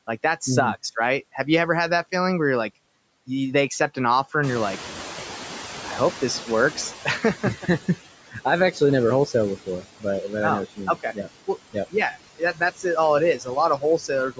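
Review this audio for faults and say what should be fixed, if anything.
Noise suppressor artifacts run through the whole clip. The suppressor pulls down the bands it judges to be steady noise by about 15 dB, frame by frame, so the leftover background ducks between phrases and swells under the speech. Lighter suppression or a smoother gain curve over time would keep that residue from pumping.

The noise suppressor is catching up from 4.43 to 7.89 s, right after "they accept an offer". The room noise jumps by about 14 dB at around 4.5 s, and the noise estimate lags, so that louder noise comes through with less reduction at first. It then sinks over roughly 3.5 s until the cut reaches about 13 dB. Faster tracking of the noise floor would shorten that window.

Speech cut by the noise suppressor happens six times: 8.28–8.37, 8.72–8.81, 9.66–10.32 (after "never wholesale", before "but oh"), 10.76–11.95 (after "oh what"), 12.39–12.84, and 13.38–14.39 s. 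Quiet bits of speech get mistaken for noise and drop by about 10 to 16 dB, so endings and soft consonants sound swallowed. A less aggressive gate on low-level speech would protect them.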